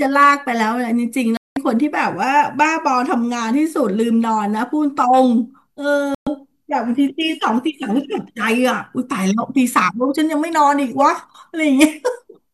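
A digital broadcast dropout hits at 1.37 s, where the speech cuts to silence for about 192 ms, and again at 6.15 s for about 120 ms. The receiver stopped getting valid frames, a loss that fits roughly eight and five frames, and muted until clean data returned, so that stretch of speech is gone.

Hard clipping follows from 11.01 to 11.07 s. The signal there runs about 1 dB past what the chain can pass, so its peaks are sliced flat, adding high harmonics that come through as a brief crackle on the loudest moments.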